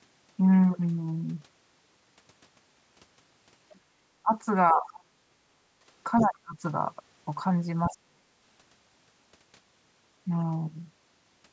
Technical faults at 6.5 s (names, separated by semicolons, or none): speech suppressed in double talk